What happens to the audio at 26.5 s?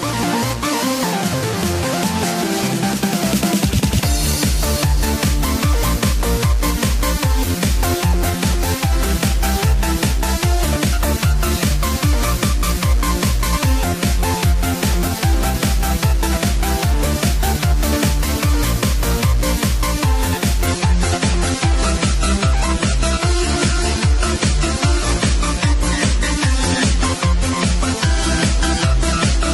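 At 26.5 s the adaptive stream is playing at a lower bitrate. From 20.67 s onward the player switched to a leaner encoding, consistent with 128 dropping to 32 kbit/s MP3. Nothing above 11.5 kHz remains, and the treble turns dull, abruptly and without a gap.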